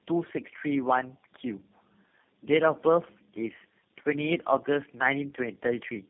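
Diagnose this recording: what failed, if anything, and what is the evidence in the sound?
Tandem speech coding at the codec stage, present throughout. The speech sounds rough, muffled and warbly, with nothing above 3.4 kHz. This points to about three low-rate speech codecs in series, each re-encoding the previous one's artefacts. A spectrogram would show a hard 3.4 kHz ceiling and smeared, wavering harmonics.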